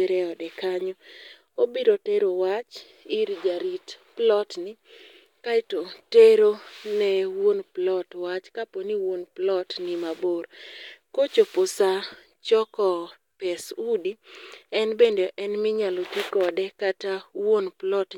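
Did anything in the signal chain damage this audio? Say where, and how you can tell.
No, nothing in the chain has left a mark on this speech that I can hear, so there's no damaged stage to point to.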